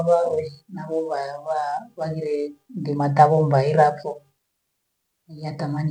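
No technical faults can be heard anywhere in the speech recording, and the signal stays steady and intact throughout.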